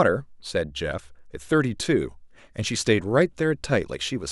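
No technical faults are audible in this speech.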